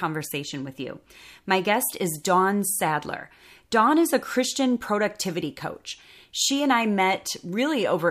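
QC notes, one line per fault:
No faults heard in this speech recording.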